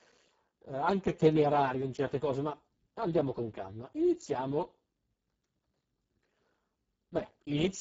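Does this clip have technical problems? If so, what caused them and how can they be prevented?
Yes. Throughout the clip, the speech carries heavy Speex codec damage. It sounds hoarse, buzzy and partly robotic, which points to a very low Speex setting around 6 kbps. At that rate the CELP coder has too few bits to model the excitation faithfully. On a spectrogram, content stops sharply at 7.6 kHz. Above 4 kHz the harmonics blur into a smeared, noise-like wash, and below that the harmonic lines look grainy and unstable. To prevent this, encode at a higher Speex quality setting or switch to a modern codec such as Opus with adequate bitrate.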